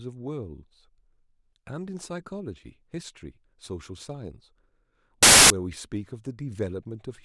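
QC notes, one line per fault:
5.23–5.50 s, file tags played as audio: embedded cover-picture data got decoded as samples, so you get a very loud white-noise burst with hard edges.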